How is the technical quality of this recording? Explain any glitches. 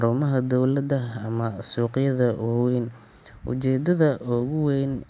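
The technical quality of the recording is good, with no glitches to explain.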